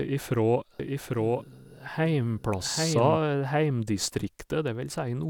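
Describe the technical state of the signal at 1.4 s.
At 1.4 s you're inside a doubled audio track, which runs from about 0.80 s to 3.18 s. A second, full-band copy of the speech sits roughly 0.7 s behind the original and a few dB quieter, with no reverb tail or room colour. It's likely a second capture through a slower path or an out-of-step edit. You hear a dry, overlapping echo of the speech that cuts in and out abruptly at both ends.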